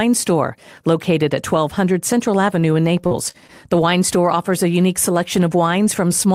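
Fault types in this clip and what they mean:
Repeated packet loss (robotic sound): between about 3.01 and 3.52 s the speech goes choppy, because four separate gaps land in quick succession, the longest only 37 ms. Each hole gets papered over by stretching out the sound just before it, roughly 103 ms of patching in all, covering about a fifth of that half-second, while around 80 ms of real audio never arrives. That tight run of short gaps is what gives the robotic edge.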